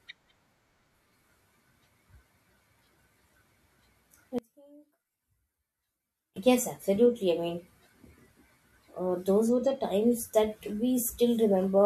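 A speech recording that, from 4.39 to 6.36 s, collapses to a faint remnant about 25 dB down. The likely cause is one channel inverted: reversed polarity on one side makes the centred speech cancel against itself when the channels are summed to mono.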